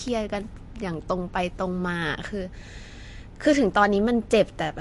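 From start to finish, the speech carries plainly audible damage that points to MP3 compression as the likely cause. Nothing sounds above 11.3 kHz, so the treble stops at a hard ceiling. That fits a low bitrate around 48 kbps. At that rate the encoder runs short of bits. It drops the top band and discards weak frequency detail that flickers between frames. The result sounds watery and swirly, and sharp onsets lose their edge.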